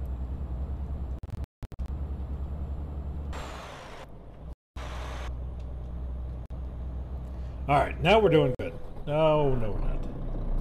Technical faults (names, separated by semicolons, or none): Bluetooth dropout